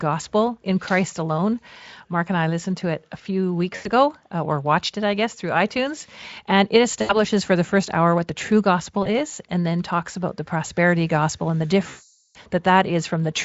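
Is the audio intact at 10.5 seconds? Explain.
Yes, the audio is intact at 10.5 seconds, with no fault at that moment.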